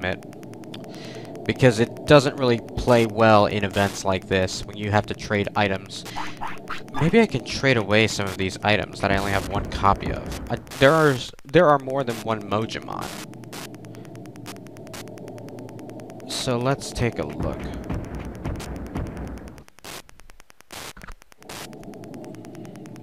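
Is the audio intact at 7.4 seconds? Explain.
No. At 7.4 s, as across the whole clip, Wi-Fi interference is present: a nearby radio's beacon, repeating every 102.4 ms, is rectified by the audio circuit. It is heard as a steady ticking near ten times a second, roughly 20 dB below the signal.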